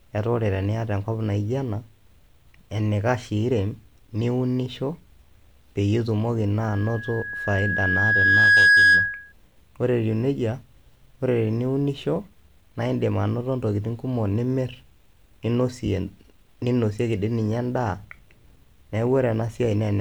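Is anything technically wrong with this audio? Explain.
Yes. From 6.62 to 9.33 s there is loudspeaker feedback squeal, a single tone at 1.6 kHz. A microphone is picking up the loudspeaker it feeds, and at that frequency the round trip gains more than it loses, so the tone reinforces itself on every pass. It swells over about two seconds until it sits roughly 10 dB above the speech. That steady growth separates it from a constant interfering whistle, which would start at full strength.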